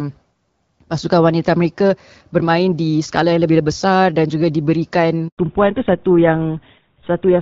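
At 5.28 s the call is handed from one network to another, and for the 100 ms of the switch no speech frames reach the receiver. This is a handover gap. The speech fades out within a few tens of milliseconds and a hole of silence follows until the new link picks up at 5.38 s. Whatever was spoken in that tenth of a second is gone and cannot be recovered.

From 5.38 s to the end, the new link does not carry HD Voice, and the call falls back to narrowband. Up to that point the speech is carried by the AMR wideband (HD Voice) codec, with only light coding damage and content reaching up toward 7 kHz. After the switch, the older GSM full-rate codec takes over and nothing above 4 kHz survives. The speech loses its top end and sounds duller, muffled and rougher for the rest of the clip.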